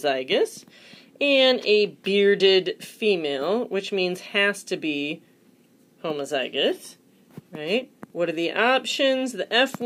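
No technical fault can be heard anywhere in the audio; the signal stays continuous and intact throughout.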